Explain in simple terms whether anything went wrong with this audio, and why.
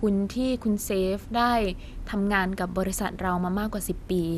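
From start to finish the speech sounds dull and muffled, with a gurgling, grainy roughness clinging to it, and nothing above about 15 kHz. This is MP2 compression, the likely cause. That older format splits the sound into many narrow slices and shares out a limited amount of data between them. Here there wasn't enough, so the top slices are dropped and the rest are stored coarsely, leaving that swirly, broken texture.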